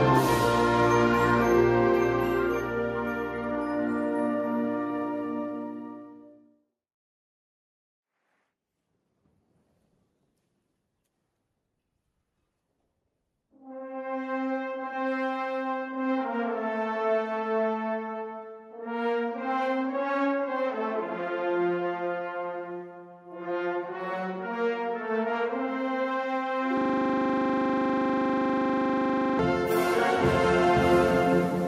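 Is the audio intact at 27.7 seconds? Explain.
No, 27.7 s falls inside a system hang loop running from 26.77 to 29.39 s. The machine stalled while the audio hardware kept replaying its last 40 ms buffer about 65 times, so you hear a flat, steady buzz at 25 Hz.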